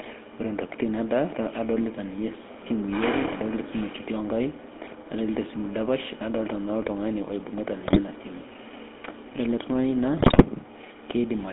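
GSM full-rate codec coloring runs from start to finish: the speech is squeezed into a band of roughly 200 Hz to 3.5 kHz, and the pulse-driven vocal-tract model, consistent with the 13 kbps full-rate coder, leaves a plainly audible buzzy, gravelly roughness on the voice.

GSM bit errors strike from 7.86 to 8.00 s and again, more severely, from 10.20 to 10.44 s. Corrupted filter, pitch and gain values bend the decoded spectrum and level, so the speech breaks into squawks, pops and gargling, spanning several frames each time.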